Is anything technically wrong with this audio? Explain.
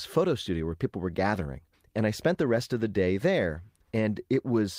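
No, nothing technically wrong can be heard in this speech recording. There is no fault to point to at any moment in it.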